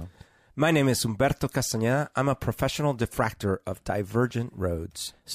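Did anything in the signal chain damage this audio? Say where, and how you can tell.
No, nothing in this speech recording stood out as damage from any stage of the signal chain when I listened to it.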